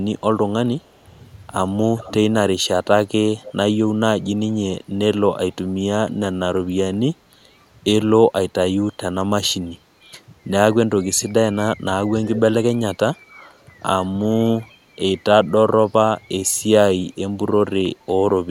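At 0.8–1.28, 1.97–2.14, 3.43–3.52 and 12.25–12.4 s, echo leak returns faint copies of the speech 337 ms late, very quiet at first and louder by 12.25 s, likely from an echo canceller missing loudspeaker pickup. Spectrograms show weak, delayed repeats of the preceding harmonic patterns.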